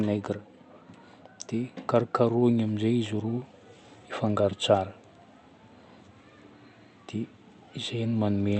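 From 1.5 to 3.52 s, automatic gain rising: the gain control judged the input too quiet and lifted it by about 4 dB. Speech and background swell together, the waveform envelope widening steadily. The call codec's band limit near 8 kHz shows as an empty spectrogram top.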